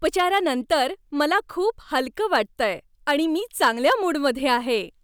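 Right after "आणि मी", from 3.62 to 4.54 s, there's hard clipping: the speech runs about 5 dB over what the stage can pass, so peaks flatten and crackle.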